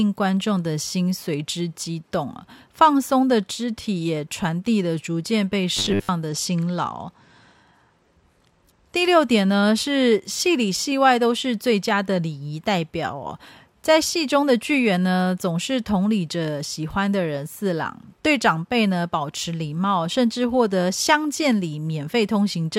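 From 5.77 to 6.09 s the speech turns into a rigid, metallic 100 Hz buzz, robotic sound from repeated short buffers. The likely cause is a starved stream repeating one 10 ms chunk while most of the real audio is skipped. A spectrogram shows a harmonic comb spaced 100 Hz apart, and the waveform shows identical 10 ms blocks.

Right after, from 6.28 to 8.95 s, comes a Bluetooth SBC bit pool drop. The treble goes dull and a gritty noise rises, which fits the bit pool falling from 28 to 12 and a rate near 96 kbps. A spectrogram shows the upper bands thinning or blank, with grainy speckle below.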